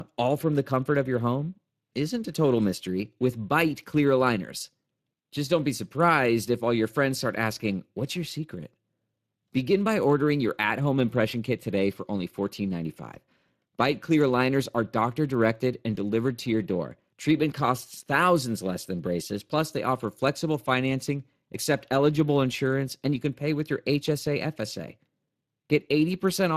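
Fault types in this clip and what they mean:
Speex codec: The speech has been through Speex, an older CELP codec from VoIP and game chat that rebuilds the voice from a predicted filter plus a coarsely coded excitation signal. The damage is plainly audible here as a rough, hoarse grain over the speech, which fits a bitrate of around 22 kbps.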